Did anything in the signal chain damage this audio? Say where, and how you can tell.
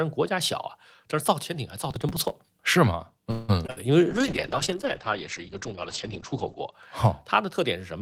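Yes. From 1.78 to 2.33 s the driver and buffer stage fell behind: the processor missed roughly thirty deadlines for buffers of about 3 ms and skipped them outright. Each skip leaves a hard-edged gap, so the speech carries a gritty crackle that clears once the load passes.

At 3.31 to 3.51 s the network held up the call audio, likely emptying the jitter buffer. The receiver stretched the last sound into a fading buzz or hiss for 176 ms, then carried on where it stopped, so nothing is lost but the speech now runs 176 ms late.

Between 3.67 and 3.70 s about 20 ms of the call never reached the decoder in time. Concealment filled the hole by extending the preceding sound and blending back, which comes across as a brief smear or wobble in the speech.

From 3.70 to 3.78 s a burst of packet loss took out 60 ms. The receiver continued the last sound at falling level, a held buzz or fading hiss, then resumed further on with that stretch missing, so the speech jumps.

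From 4.10 to 6.78 s a call bitrate drop starved the codec: the bandwidth estimate fell and the encoder went from 32 to 9 kbps, staying at the bottom for about 2.5 s. Coarser coding and a cutoff lowered from 20 kHz to 8 kHz make the speech sound rough and muffled.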